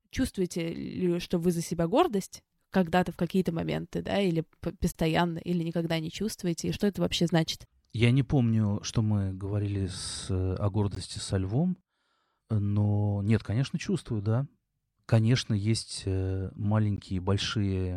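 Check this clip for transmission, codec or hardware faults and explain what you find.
The clip has one kind of fault, a gap at a join of encoded pieces, recurring every 6 s. The speech was encoded in separate pieces and spliced without trimming the encoder's start-up delay and end padding, so silence sits at each seam. It cuts in at 4.92 to 4.95 s (about 27 ms, after "моменты да или"), at 10.95 s (16 ms, before "со львом") and at 16.96 s (16 ms, after "есть э"). Each is a brief dropout with smeared edges, and the speech resumes where it stopped.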